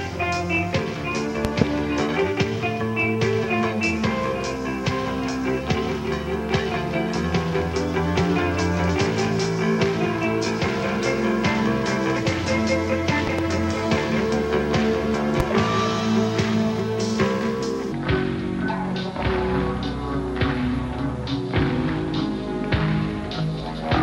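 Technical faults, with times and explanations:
1.45–1.64 s, 13.27–13.41 s and 15.40–15.43 s, loud pop: a pair of sharp pops, another pair, then a single one, up to roughly 20 dB above the sound. Likely a voltage spike from a plug, switch or static.
17.92 s to the end, section at the wrong speed: plays at about 0.71x, so everything drops roughly five semitones and drags. Likely it was fitted to the wrong clock.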